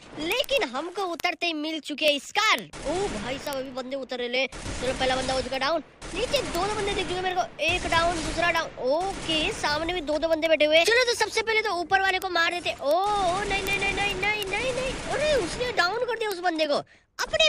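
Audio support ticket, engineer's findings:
Receiver not locked to sender's word clock, drifting roughly 400 ppm. Single samples slip, giving word clock ticks about every 0.07 s from 0.13 to 17.45 s.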